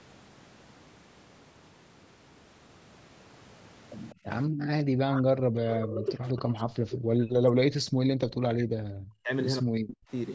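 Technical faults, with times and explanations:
4.1–4.15 s, echo leak: A very faint delayed copy of the speech slips through, roughly 30 dB down and trailing by about 196 ms. It's likely the far end's echo canceller missing a bit of what its loudspeaker fed back into the mic.
4.15–4.26 s and 4.48–4.68 s, background gated by the echo canceller: The room tone ducks out, by about 27 dB in the first spot and about 40 dB in the second. The canceller clamped the mic hard while the loudspeaker was playing, then let go.
4.98–5.32 s, 5.53–9.3 s and 9.62–10.04 s, speech suppressed in double talk: The talker's speech drops away by as much as about 40 dB, briefly at either end and for nearly four seconds in the middle. This is likely the canceller confusing overlapping talk with echo and turning everything down.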